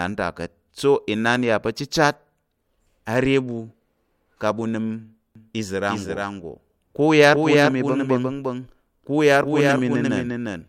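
Speech with a doubled audio track from 5.35 s to the end, likely a second, slower capture path mixed in: a dry copy trails by roughly 400 ms, about 5 dB quieter, starting abruptly.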